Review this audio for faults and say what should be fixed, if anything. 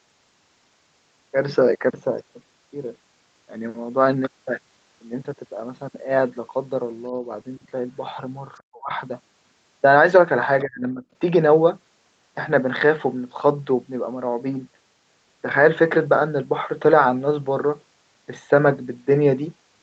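Speech suppressed in double talk, at 7.09 to 7.26 s, 8.63 to 8.91 s and 10.65 to 11.03 s: the talker's level drops while another voice is present. The first dip is slight, only about 5 dB. The second is deep enough to leave the speech almost silent for roughly a third of a second. The third cuts the speech down sharply for about 0.4 s. This is likely the echo canceller failing to tell the near talker from loudspeaker echo and attenuating everything it hears. Preventing it means tuning the echo canceller's double-talk detection so it backs off suppression when both sides speak, or using a headset so there is less echo to fight.

Other side's voice leaking through, at about 10.6 s, lasting only around 40 ms: a brief, faint scrap of a second voice, far below the talker, slips into the microphone signal just before the third suppression. Residual echo from the loudspeaker is likely what escaped the canceller here, and the suppressor then clamped down immediately afterward. 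Preventing it means giving the canceller better echo-path adaptation and loudspeaker reference alignment, or lowering speaker volume relative to the microphone.

The top end stops at 8 kHz, as expected from the Opus call path at this bandwidth.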